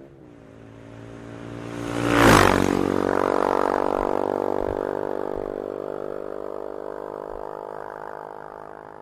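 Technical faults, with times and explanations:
No technical faults can be heard in this audio.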